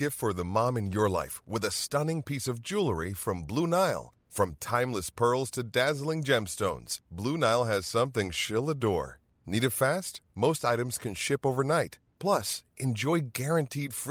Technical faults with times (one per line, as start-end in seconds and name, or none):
none